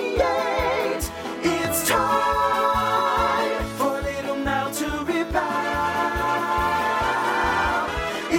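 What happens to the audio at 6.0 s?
Nothing goes wrong at 6.0 s; the audio carries on intact through that moment with no audible fault.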